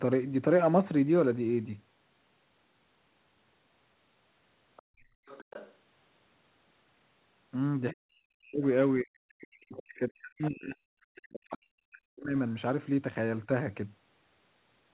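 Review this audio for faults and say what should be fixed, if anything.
A faint second voice slips in under the talker from 4.76 to 4.82 s, about 30 dB below the speech, then more clearly from 5.26 to 5.74 s and in short scraps at 9.74 to 9.83 s and 10.38 to 10.47 s, roughly 20 dB below the speech. This is likely the other side's voice leaking through: the far end plays on a loudspeaker and the echo canceller left part of it in the microphone signal. To prevent it, give the canceller a clean loudspeaker reference and enough time to adapt, or use a headset.

Between 4.82 and 5.26 s the room sound drops away, by up to about 32 dB for a little under half a second, and comes back when the canceller lets go. This is background gated by the echo canceller, which clamped the microphone while far-end sound was playing. To prevent it, set the suppressor to attenuate gently and add comfort noise instead of muting outright.

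The talker's own voice sinks and breaks up from 7.92 to 8.63 s, 9.01 to 10.76 s and 11.13 to 12.37 s, falling by around 40 dB at its deepest. This is likely speech suppressed in double talk: both sides spoke at once, and the canceller could not separate near-end speech from the echo, so it turned both down. To prevent it, tune double-talk detection to favour near-end speech, or reduce loudspeaker-to-microphone coupling so less suppression is needed.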